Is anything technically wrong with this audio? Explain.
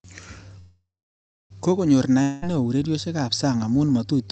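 Yes, there are two faults.

A call audio freeze runs from 0.59 to 1.52 s. The likely cause is packets held up in transit that left the jitter buffer empty. The last sound is stretched into a fading buzz that turns to silence for about 0.63 s. The audio then resumes where it stopped, with nothing lost and everything after it about 0.91 s late.

A long network dropout runs from 2.22 to 2.44 s. Audio likely stopped arriving here, and about 0.2 s was never played. The receiver fills the gap with a decaying buzz, then the audio jumps ahead to "neo ureriosiekab sang amu" with that piece missing.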